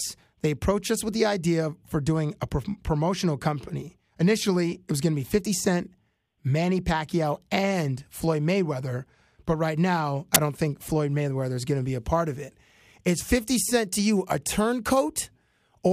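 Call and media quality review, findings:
Short burst of very loud white noise with hard edges at 10.35 s, between "right now I" and "don't think". File tags played as audio: the embedded cover picture's compressed bytes were read as samples. Component: container/tag parsing ahead of the decoder.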